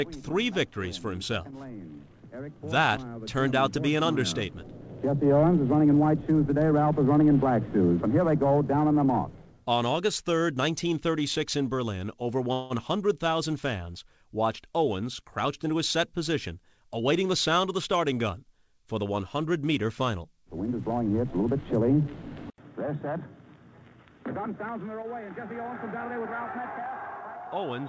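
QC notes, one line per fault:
12.53–12.73 s, call audio freeze: A 0.2 s stall. The last sound is stretched into a fading buzz with no silence, likely because packets were held up and the jitter buffer ran dry. About 170 ms was added and nothing lost, so the sound afterward continues late.
15.02–15.25 s and 15.66–17.89 s, jitter buffer speed-up: The receiver drained its surplus of delayed audio by cutting tiny pitch-period slices. The first stretch plays at 119% speed and drops around 50 ms. The second runs at 105% and removes about 100 ms. The pitch stays put, but the pace sounds rushed.
22.50 s to the end, input switched to a poorer device: An 80 ms silence comes first. Then the level falls by about 10 dB, and the band above 3.8 kHz disappears where the 8 kHz call path carried more. A fresh noise floor sits about 55 dB down. This is likely a change to a lesser microphone.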